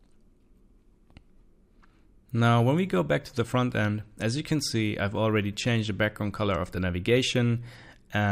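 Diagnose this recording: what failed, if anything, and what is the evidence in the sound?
Nothing failed: no fault can be heard in this recording.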